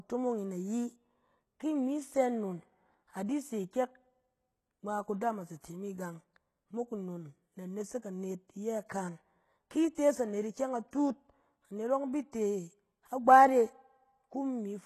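A speech recording with plainly audible codec damage throughout, most likely from HE-AAC compression at a low rate, consistent with around 16 kbps. Nothing is present above 12.3 kHz, and the upper band is synthesised from copied lower bands rather than carried directly, so sibilants sound gritty and metallic, with a treble that does not track the voice's harmonics. Pre-echo appears at 9.95 to 9.97 s, a 24 ms wash of hiss just before "tees anet ikyɛng", and again at 12.32 s with a 12 ms spread. In both places the block's quantisation noise leaks ahead of a sharp onset and blunts the attack.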